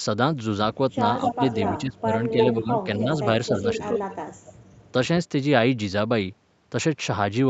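A speech recording over a call line with an 8 kHz top end, and it has a clear echo leak. A delayed copy of the talker comes back about 260 ms late at 1.21–1.82, 2.31–2.54 and 3.74–4.16 s, only about 5 dB under the speech, then much fainter from 4.32 to 4.92 s. That's most likely a loudspeaker on the far end whose echo canceller let its own pickup through. Alongside that you get speech suppressed in double talk: the voice dips briefly at 1.37–1.41 and 2.30–2.36 s, and more heavily at 1.71–2.11 s (as much as about 20 dB) and 2.59–3.07 s (around 10 dB). The canceller probably couldn't separate the talker from the echo and ducked both.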